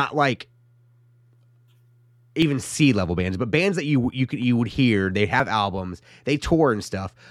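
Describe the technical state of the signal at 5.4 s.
At 5.40 s, right after "you would hear they", the speech jumps forward abruptly: a tiny sliver of sound, a few hundredths of a second, simply vanishes, and the two sides butt together with no gap of silence between them. This is audio missing between chunks. The likely cause is a recorder or processor handling the signal in 3-second blocks and dropping a short piece while closing one block and starting the next, so the seam lands here.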